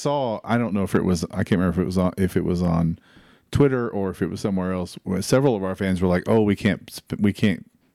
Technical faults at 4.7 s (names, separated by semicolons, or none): none